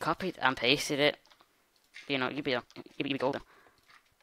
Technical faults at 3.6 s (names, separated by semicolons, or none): time-stretched section